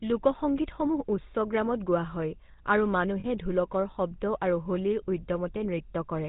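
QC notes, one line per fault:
throughout, GSM full-rate codec: the voice has a plainly audible buzzy, gravelly roughness, and nothing above 4 kHz comes through. The vocal tract is modelled and driven by sparse regular pulses, which fits GSM full rate at 13 kbps.
3.2 to 3.26 s, lost GSM frames: a brief rough, metallic ring holds the sound in place. The decoder filled the 40 ms gap by repeating the last good frame's settings. The gap fits two lost 20 ms frames.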